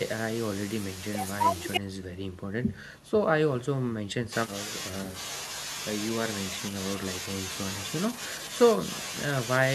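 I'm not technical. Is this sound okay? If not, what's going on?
No. There is an audio dropout to silence from 1.78 to 4.32 seconds. The speech stops abruptly and about two and a half seconds of complete silence follow, with no background sound at all, before the speech comes back mid-flow. The likely cause is that the recording briefly lost its input, through a loose connection, a failed link or an accidental mute, while the recorder kept writing pure silence. Whatever was said in that gap is gone.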